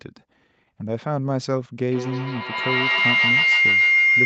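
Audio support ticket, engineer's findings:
Feedback howl from 1.9 s, runs right to the end of the clip. Tone around 2 kHz, peaking about 6 dB over the speech, loop repeating roughly every 150 ms. Probably two devices in the same room on the call: mic picks up the other speaker, loop gain above unity, so each pass builds instead of dying off. Mute one side to break it. The band topping out near 8 kHz is just the call codec.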